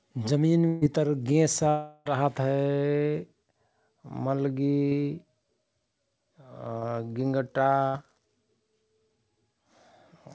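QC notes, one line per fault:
0.68–0.83 s and 7.87–7.96 s, burst of packet loss: In the first event, about 140 ms of the call went missing and the receiver covered roughly 136 ms by extending the last sound it had. That fill is heard as a held buzz or hiss that dies away. The second event is shorter, with about 60 ms lost and about 67 ms filled. In both cases the sound resumes further along, and the stretch in between is gone.
1.69–2.07 s, long network dropout: A continuation of the preceding sound stretches across about 360 ms and fades steadily without reaching true silence. The sound then returns later in the stream with that portion absent. The likely cause is a stall in network delivery, during which nothing arrived for the receiver to decode. The receiver extended the last good audio across the whole gap instead of cutting to silence.
4.89–4.93 s and 6.79–6.83 s, short concealed packet loss: At each spot about 20 ms of audio never reached the decoder in time. 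The receiver patched the hole by carrying on the previous sound, tracking its pitch where it was voiced and using shaped noise where it wasn't. It then blended back into the real signal. Each patch is heard as a brief smear or wobble, and a very short sound at that moment can drop out.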